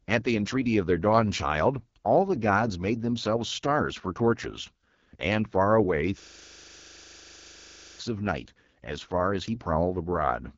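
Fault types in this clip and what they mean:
AMR wideband (HD Voice) codec: The speech was coded at a low AMR-WB rate, consistent with 8.85 kbit/s, leaving it rough and raspy with nothing above 7.6 kHz.
System hang loop: The system froze while playback kept cycling one 40 ms buffer, so from 6.20 to 7.99 s the sound repeats 45 times at 25 Hz.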